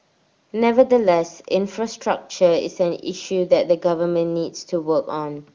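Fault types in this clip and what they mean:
Nothing here stands out as a fault, just speech coming through an ordinary HD Voice call path.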